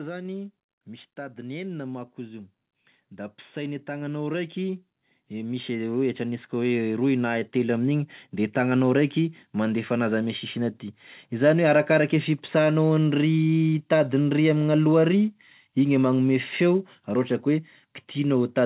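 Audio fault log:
3.09–8.65 s, automatic gain rising: the level of the speech and the background noise climbs together by about 11 dB over roughly five and a half seconds. The gain control judged the input too quiet and raised its gain step by step, so the noise floor swells along with the voice. The band-limited sound, with nothing above 4 kHz, fits a narrowband call codec such as G.711 and carries through the rise unchanged.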